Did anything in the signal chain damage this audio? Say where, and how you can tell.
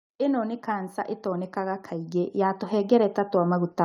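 Yes. The damage comes from the call-processing stage, where automatic gain rising sets in from about 0.18 s and continues to the end of the clip. The gain control judged the input too quiet and kept lifting its gain, so the speech and the background noise floor swell together. On a waveform the envelope widens steadily across the whole clip. On a spectrogram every band, including the gaps between phrases, brightens evenly.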